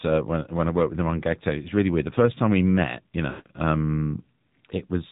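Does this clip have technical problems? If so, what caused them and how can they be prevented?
Yes. Throughout, the speech goes through the AMR narrowband mobile codec. Nothing passes above 4 kHz, and the voice sounds plainly buzzy and synthetic, which fits a low mode around 7.4 kbps. Use a wideband codec or a higher bitrate.

From 3.30 to 3.48 s, just after "time we met you", there are lost AMR speech frames. The decoder repeats the last good frame at falling gain, so the sound smears and fades, which fits about eight lost 20 ms frames. Improve radio coverage to prevent it.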